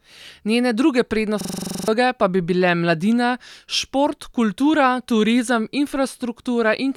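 From 1.41 to 1.88 s the speech gives way to a rapid, rattling stutter at about 23.4 Hz, one 42.67 ms fragment hammered out eleven times before the speech resumes on "pa bi bile mladina". This is a system hang loop. The computer or its audio driver stalled, while the sound hardware kept replaying the same ring buffer, which fits a 2048-sample buffer. Roughly half a second of the real speech never made it out.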